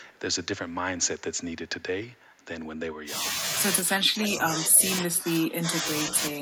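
Echo leak at 0.02 to 0.19 s and again at 2.12 to 2.45 s: a faint copy of the speech returns about 0.33 s late, very quiet beneath the voice. The likely cause is a far-end loudspeaker echo canceller that did not fully cancel its microphone's pickup.

Speech suppressed in double talk at 3.04 to 3.24, 3.93 to 4.86, 5.02 to 5.84, 6.05 to 6.13 and 6.31 to 6.40 s: the voice dips, by about 10 dB in the first two spans and about 5 dB later. This is likely an echo canceller that mistook overlapping talk for echo and attenuated it.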